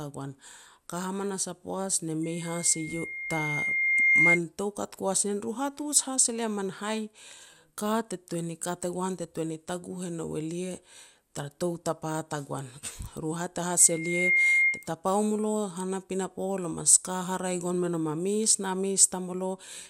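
At 2.23 s a microphone starts picking up the loudspeaker it feeds, and at 2.1 kHz the loop gain climbs past unity. The result is loudspeaker feedback squeal: a pure tone swells over about two seconds to roughly 10 dB above the speech and rings until 4.40 s. The same 2.1 kHz squeal returns at 13.79 s, building much faster, in about half a second, and lasting until 14.88 s.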